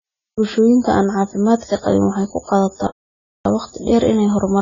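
AAC compression runs through the whole speech clip. Nothing is heard above 7 kHz, so consonants lose their crispness and the sound turns dull. Sibilants and held vowels take on a fizzy, warbling texture. This heavy damage is likely the work of an AAC-LC encoder at a very low bitrate, around 16 kbps. At that rate it cuts the top band and quantises what remains so coarsely that parts of the spectrum are left empty or filled with substitute noise.

A playback stall runs from 2.87 s to 3.45 s, a silence of about 0.58 s. The speech stops abruptly in mid-flow and then picks up again. The likely cause is that the player ran short of data, or its output thread was held up. Nothing reached the output until it recovered, which leaves a noticeable gap.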